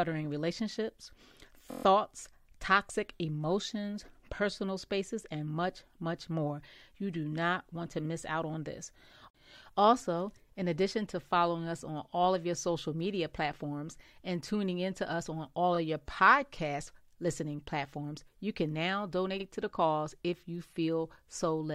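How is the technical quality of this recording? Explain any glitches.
The recording has three repeated-frames glitches, where a stretch of compressed audio was sent twice or more, so the decoder replays it as a brief stutter.

At 1.70 to 1.84 s, a 23.2 ms block that fits a single frame plays six extra times, adding 139.3 ms as a rapid stutter.

At 15.75 s, between "to us on all" and "of your podcasts listening", one 23.2 ms block repeats once, a tiny hiccup adding 23.2 ms.

At 19.39 to 19.44 s, between "can now" and "to the cause if", a 46.4 ms block that points to two frames repeats once, adding 46.4 ms as a short skip-back stutter.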